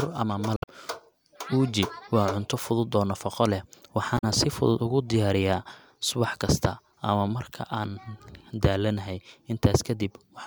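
Damaged data in the compressed stream, at 0.54 to 0.69 s and 4.17 to 4.24 s, makes the decoder misread frames and lose sync, leaving brief glitches in the speech.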